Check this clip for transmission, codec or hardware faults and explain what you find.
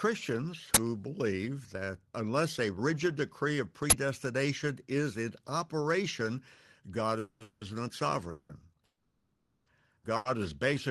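Three kinds of fault are audible in this speech: two uninitialised-buffer bursts, a run of call audio freezes, and one short stall from a late packet. The audio also carries the mild coding texture and top end limited to about 12 kHz of a call codec such as Opus.

Uninitialised buffer, 0.74–0.77 s (just before "believe that unless a") and 3.90–3.92 s (just after "a rigid decree of"): each is a sudden, very loud crackle of digital noise lasting about 23 ms. That length fits a 1024-sample block sent to the output before any audio was written into it, so stale memory contents played as sound.

Call audio freeze, 7.19–7.42 s, 7.42–7.63 s, 8.31–8.51 s and 8.85–9.68 s: the sound smears into a held, buzzy tone that fades, then resumes where it left off. These are fills of about 210, 190, 180 and 810 ms. The longest dies to about 40 ms of silence before recovering. Nothing is skipped, but the timing stretches. 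The likely cause is delayed packets draining the jitter buffer.

Short stall from a late packet, 10.16–10.27 s: a brief hold of about 90 ms with a faint buzz. The receiver stretched the last sound while a packet arrived late, then carried on from the same point with nothing lost.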